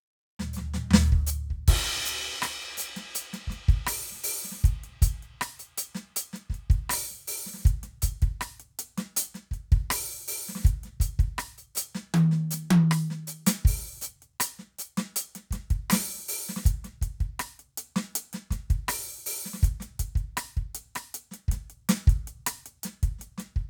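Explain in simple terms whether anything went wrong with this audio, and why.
Nothing went wrong: the music runs without a single audible fault at any point.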